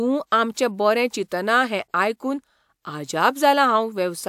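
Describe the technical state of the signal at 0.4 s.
At 0.4 s the speech signal is intact, with no audible technical fault at that point.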